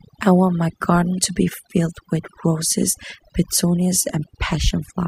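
A speech recording with overdone noise removal from start to finish: bands near the noise floor are gated away, taking quiet parts of the voice with them and leaving twinkling specks in near-silent gaps.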